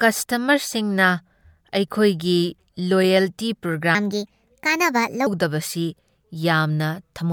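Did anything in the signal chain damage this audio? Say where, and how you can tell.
Yes. From 3.95 to 5.27 s, a section at the wrong speed plays 1.29 times fast, pitch jumping roughly four semitones. This likely comes from playback on a mismatched clock.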